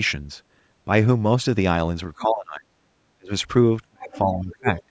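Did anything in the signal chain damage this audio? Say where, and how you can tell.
Yes, at the call-processing stage. The talker's speech repeatedly sinks or drops out: from 2.19 to 2.76 s, 3.14 to 3.31 s, 3.89 to 4.67 s, and again from 4.86 s to the end. At the deepest points it falls by roughly 25 to 35 dB. This is speech suppressed in double talk, likely caused by the echo canceller. With both sides talking at once, it could not tell the near talker from the loudspeaker echo and turned both down.

A second, fainter voice also comes through in short scraps at 4.11 to 4.19 s and 4.75 to 4.83 s, sitting some 20 to 25 dB below the talker. This is the other side's voice leaking through. It was most likely residual echo from the talker's loudspeaker that the canceller failed to remove from the microphone. The scraps are brief, landing in and just after the longest suppressed stretch. The band limit near 8 kHz comes from the call path itself.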